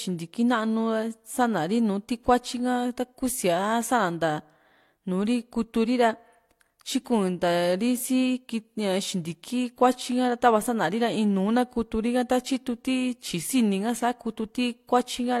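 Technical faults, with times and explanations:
Nothing technical stands out in this bit of speech; there's simply no fault to list here.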